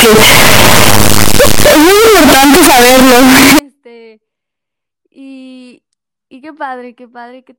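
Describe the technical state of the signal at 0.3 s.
At 0.3 s the speech is buried in loud, harsh distortion running from 0.0 to 3.59 s, with quiet stretches as loud as the rest. That's likely a signed and unsigned mix-up in what sounds like 16-bit samples, flipping the top bit so every zero crossing jumps full-scale.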